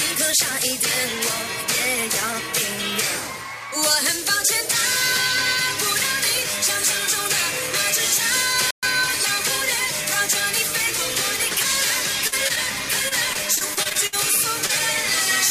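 At 8.71 s the sound cuts out mid-flow for about 120 ms, then resumes by 8.83 s. This playback stall is likely the player running dry of buffered data, or its thread being briefly blocked, leaving the output silent until it caught up.

From 12.27 to 12.34 s there is a short smear where about 40 ms is missing, followed by a smaller blur from 12.48 to 12.51 s covering about 20 ms. These are short concealed packet losses: the data arrived too late to decode, so the receiver extended the preceding sound to fill each hole before blending back into the real signal.

Between 13.09 and 14.14 s the sound turns choppy as repeated packet loss leaves pieces missing. Nine separate gaps fall within that second, the longest about 59 ms, and roughly a fifth of the stretch is synthetic fill carried over from the preceding audio rather than the real signal.

At 14.66 to 14.71 s one more brief blur covers a missing 20 ms. 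It is another short concealed packet loss, patched by continuing the last sound before the decoder rejoined the real stream.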